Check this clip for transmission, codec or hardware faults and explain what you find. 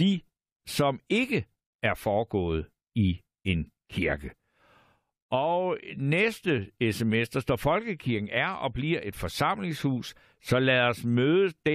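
No transmission or hardware faults.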